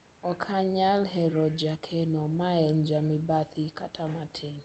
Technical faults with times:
none

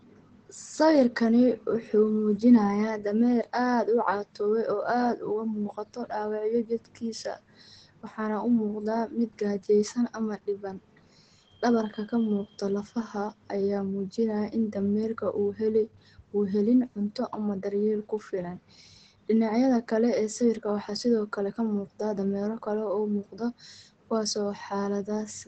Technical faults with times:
0.00-25.48 Opus compression

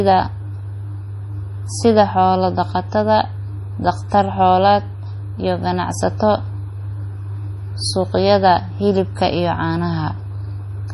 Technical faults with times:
0.00-10.94 MP3 compression

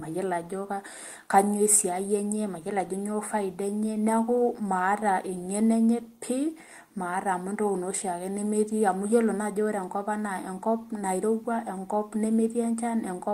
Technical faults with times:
none

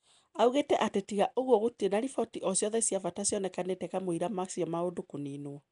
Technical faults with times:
0.00-5.71 Nellymoser compression

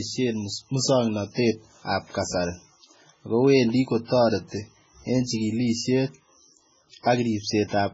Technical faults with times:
0.00-7.93 MP3 compression

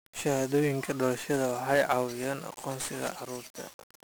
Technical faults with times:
0.00-4.04 1-bit DFPWM compression

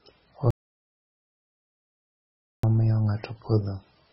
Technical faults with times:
0.00-4.12 MP3 compression
0.50-2.63 audio dropout to silence

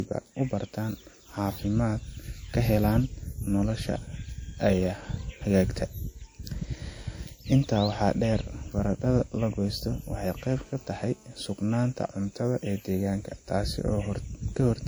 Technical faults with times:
0.00-14.88 low-bitrate audio saved at a high bitrate
10.48-11.29 GSM phone buzz

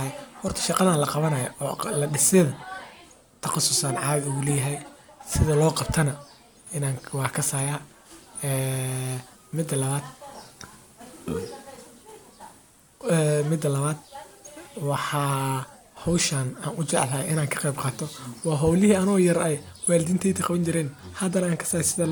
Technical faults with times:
none

